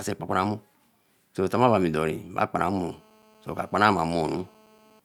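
A speech clip where, from about 2.58 s to 5.00 s, a hard, raspy GSM phone buzz sits under everything at roughly 217 Hz with a stack of harmonics, about 32 dB below the speech. It's steady, which fits a nearby 2G phone on a call whose transmit bursts the audio circuitry is rectifying.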